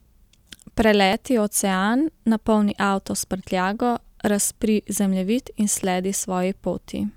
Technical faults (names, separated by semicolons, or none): clock drift buffer slips